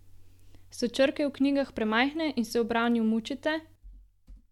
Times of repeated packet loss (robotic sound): none

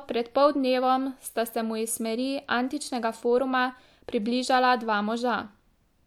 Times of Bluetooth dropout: none

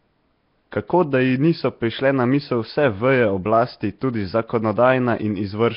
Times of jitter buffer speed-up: none

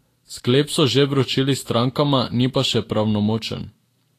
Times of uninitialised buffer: none

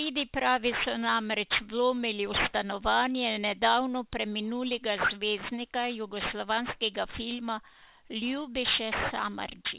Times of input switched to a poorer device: none

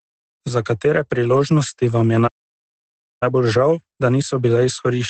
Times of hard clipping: none

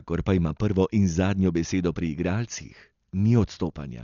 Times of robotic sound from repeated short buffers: none

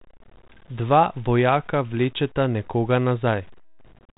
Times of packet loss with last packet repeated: none

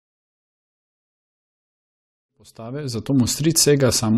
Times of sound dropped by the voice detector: none

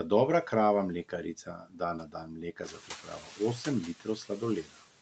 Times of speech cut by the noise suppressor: 1.46-3.40

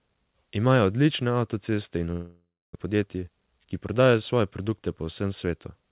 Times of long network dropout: 2.12-2.77

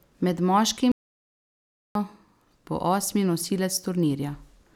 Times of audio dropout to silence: 0.92-1.95

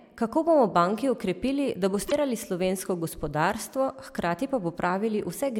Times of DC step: none

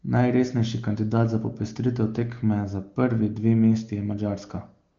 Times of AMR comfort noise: 4.91-4.98

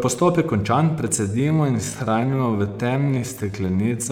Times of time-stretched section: 1.12-4.12

